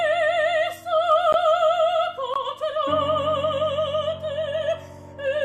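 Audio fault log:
1.33 s and 2.34 s: gap between stream segments. The sound stops dead for about 15 ms, then about 17 ms, with hard edges at both ends. The two holes sit one second apart, which fits one-second stream segments. At each join the time stamps of neighbouring segments leave a small gap, and the player fills it with silence. Nothing is lost, so the sound resumes exactly where it broke off, just slightly late.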